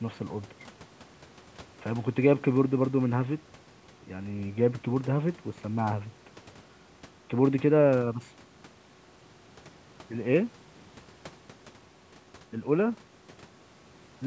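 Nothing stood out on listening; the speech carries the expected trace of call microphone processing, with the lowest bass trimmed away and nothing above 8 kHz.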